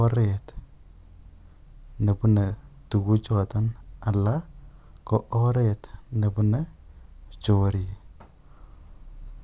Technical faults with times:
none

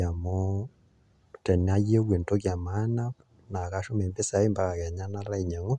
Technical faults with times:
none

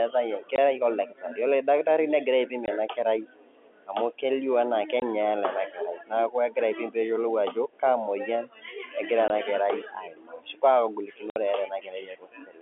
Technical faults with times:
0.56 packet loss filled with silence
2.66-2.68 packet loss filled with silence
5.00 packet loss filled with silence
9.28-9.30 packet loss filled with silence
11.30-11.36 packet loss filled with silence

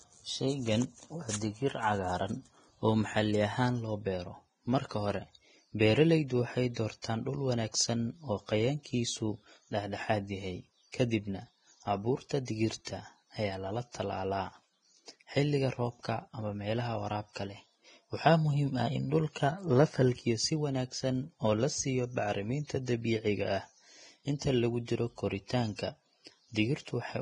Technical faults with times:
0.00-27.21 Vorbis compression
7.02-7.04 pre-echo

